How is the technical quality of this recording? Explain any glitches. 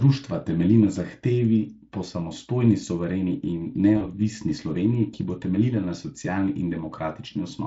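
There's one real glitch, sitting on top of light Speex coding that adds just a touch of hoarseness. Right after "po samostojni suvereni in", from about 3.97 to 4.07 s, there's VoIP packet loss concealed by the speech codec. About 40 ms of audio went missing, which fits two lost 20 ms frames. The decoder guessed its way through by repeating its last pitch and filter at dropping gain, so you hear a brief buzzy or noisy smear that fades and stays weak or distorted for a moment afterwards.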